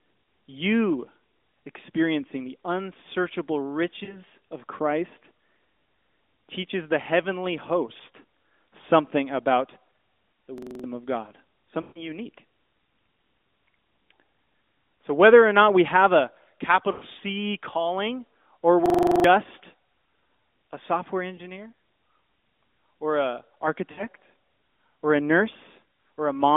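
At 4.04 s the speech briefly dips and warbles for about 40 ms. These are lost AMR speech frames: corrupted frames failed their checksum, so the decoder kept reusing its last good pitch and vocal tract settings while the gain fell. At 10.58 s a machine-gun stutter begins, as one 42.67 ms slice repeats six times at 23.4 per second, and roughly 0.3 s of audio is lost. This is a system hang loop: the system froze while the sound hardware kept cycling one ring buffer, which fits a 2048-sample buffer. At 11.82 s the sound drags out and fades toward silence across about 140 ms of lost frames. At 16.92 s a similar 100 ms smear ends just before "calling or". At 18.86 s the stutter returns with nine repeats of the same short slice, and roughly 0.4 s of audio is gone. At 21.36 s, right after "a software", there is a single 20 ms blip. At 23.92 s, following "or a", about 60 ms warbles and weakens before the speech recovers. 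The whole clip stays within the narrow 250 Hz to 3.6 kHz band of the AMR narrowband mobile codec.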